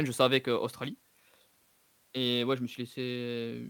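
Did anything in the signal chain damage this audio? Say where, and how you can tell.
Yes: a fine hiss rides on the speech throughout, louder on strong, bright sounds and gone in pauses. That's sample clock jitter at the converter, timing wobbling by a few microseconds, leaving error roughly 30 dB down.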